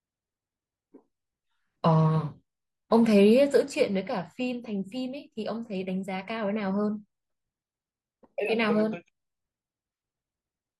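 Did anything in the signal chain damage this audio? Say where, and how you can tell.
No, nothing damaged this audio.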